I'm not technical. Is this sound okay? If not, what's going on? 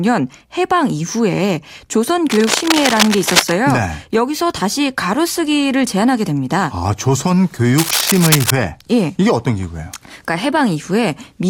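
No. From 2.30 to 3.52 s and again from 7.78 to 8.51 s, a rough scratching noise sits over the speech, louder the second time. This is cable scratch noise, likely from a worn cable or plug being moved, which makes uneven bursts rather than separate clicks or steady hiss.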